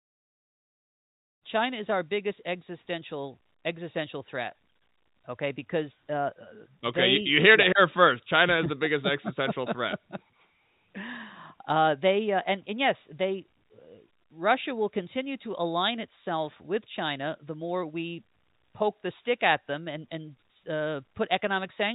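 Speech over a G.711 A-law call path at 64 kbps, band-limited to 4 kHz as that codec requires, with no technical faults to report.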